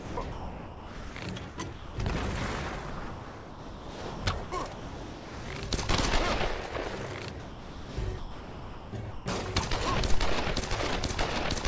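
From 0.0 to 1.16 s, 1.49 to 1.97 s, 2.9 to 5.48 s and 7.4 to 9.26 s, the sound turns choppy. A synthetic hiss replaces real background. The likely cause is sound chopped by the voice detector, which swapped quiet stretches for comfort noise.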